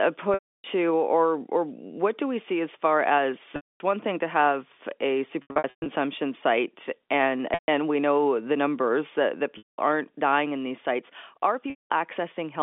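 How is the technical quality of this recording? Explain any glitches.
Six dropouts from packet loss with pitch repetition break up the speech, carried over G.711 telephone coding. They fall at 0.34 to 0.64 s, 3.56 to 3.80 s (between "see as far as" and "one thing to have"), 5.42 to 5.86 s, 7.54 to 7.68 s, 9.58 to 9.78 s (between "the numbers that that" and "aren't dying in these"), and 11.70 to 11.90 s. Packets went missing. The receiver repeated the last pitch period, fading it out over about 50 ms. Each gap is 140 to 320 ms long, so the held buzz dies into silence before speech cross-fades back. The 5.42 s gap is scattered over 440 ms, with runs up to 120 ms. The sizes fit 20 ms packets.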